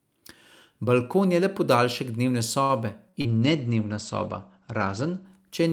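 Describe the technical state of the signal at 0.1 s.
At 0.1 s the speech signal is intact, with no audible fault at that moment.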